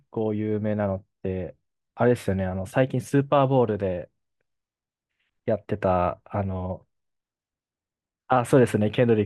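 No technical faults are audible.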